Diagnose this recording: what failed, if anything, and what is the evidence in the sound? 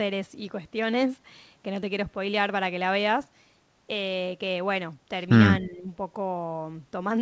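Speech suppressed in double talk, 5.62 to 5.88 s, at the call-processing stage: the speech sinks by roughly 10 dB for around a third of a second. The likely cause is an echo canceller, unable to separate near speech from loudspeaker echo, turning everything down.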